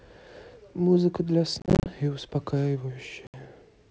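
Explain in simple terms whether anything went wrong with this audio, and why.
Something did go wrong: packet loss on an ADPCM call, twice. From 1.60 to 1.90 s the speech keeps dropping into short silent holes, about 160 ms missing in all, none longer than 30 ms, which points to a dozen or more small packets going missing. At 3.27 to 3.36 s there's another dropout of about 70 ms. Because this coding predicts each sample from the last, the receiver loses track, so the speech comes back slightly off, with some roughness, before settling.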